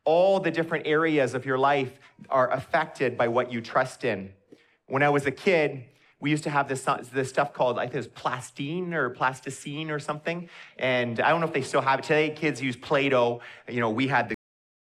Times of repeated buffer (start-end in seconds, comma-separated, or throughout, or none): none